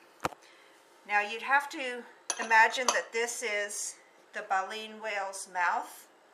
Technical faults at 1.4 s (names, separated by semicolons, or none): none